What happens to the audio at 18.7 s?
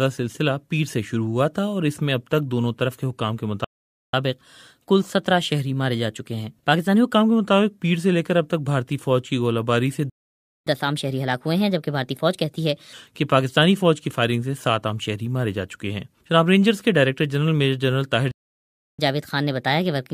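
At 18.7 s the audio is in the middle of a playback stall. The sound cuts out abruptly at 18.31 s and stays silent until 18.99 s, a gap of about 0.67 s. It breaks off mid-flow rather than fading. The likely cause is the player running short of data, or its playback thread being held up. Nothing reaches the output until it recovers. Then the sound resumes.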